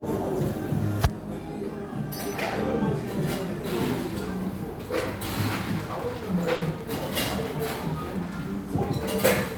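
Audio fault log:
6.55 to 6.64 s, burst of packet loss: several packets in a row failed to arrive in time, so the receiver stretched the last sound it had for about 60 ms, letting it fade, and then resumed about 60 ms further on in the stream. The skipped material and the smeared, fading tail set this apart from a plain dropout to silence, which would leave a clean hole and resume exactly where it stopped.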